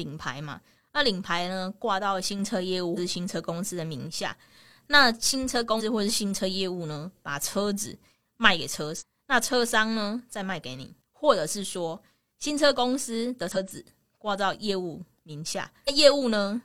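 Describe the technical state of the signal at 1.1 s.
At 1.1 s the signal is intact, with no fault to be heard at that moment.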